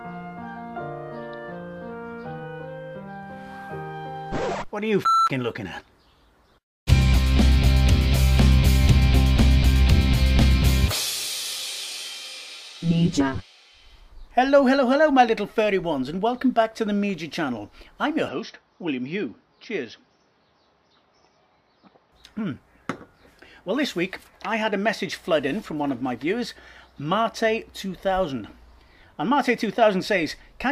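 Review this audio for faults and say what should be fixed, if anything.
From 18.29 s to 22.12 s the sound turns dull and boxy, nothing reaching above 6 kHz, and it drops a few decibels in level with a faint new background noise well beneath it; there is no gap at either edge. This points to an input switched to a poorer device, likely a narrower-band microphone or headset profile taking over briefly, with its own tone and noise. Locking the recording input to one device prevents this.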